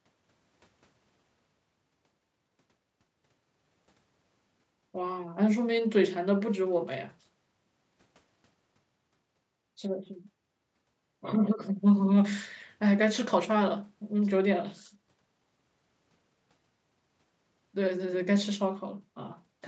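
Speech recording with no technical faults to report.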